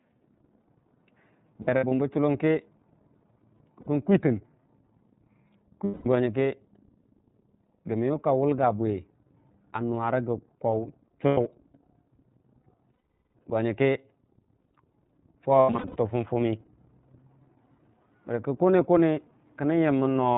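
Throughout, the speech is clear but slightly rough and synthetic, with nothing above 4 kHz and plainly audible coding damage. That is the iLBC codec: this narrowband VoIP coder rebuilds each frame's excitation on its own, trading smoothness for robustness. The rate and texture fit its 13.33 kbps mode with 30 ms frames.

From 1.62 to 1.92 s, the sound turns into a held, faintly buzzy, breathy vowel. About 150 ms is missing, scattered across 300 ms, with the longest stretch near 70 ms. Similar held tones follow at 3.80 to 3.87 s (60 ms), 5.85 to 6.06 s (210 ms), 11.28 to 11.38 s (90 ms), and 12.93 to 13.35 s, the longest at 420 ms. From 15.60 to 15.96 s, 270 ms is missing, scattered over 360 ms, with the longest run around 100 ms. These are lost iLBC frames. The decoder filled each gap by repeating the last pitch cycle mixed with noise, and because iLBC frames stand alone, the speech snaps back almost immediately afterwards.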